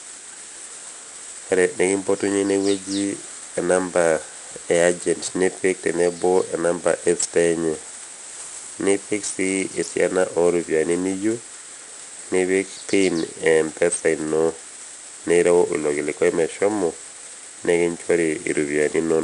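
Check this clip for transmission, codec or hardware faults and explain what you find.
One codec fault runs through the whole speech clip.

4-bit ADPCM compression, throughout: each sample is coded as a small adaptive step from a prediction, so quantisation noise tracks the speech level. It is plainly audible as gritty hiss on loud syllables and roughness on sharp onsets. Nothing sounds above 10.6 kHz, which fits a 22 kHz sample rate at about 89 kbps.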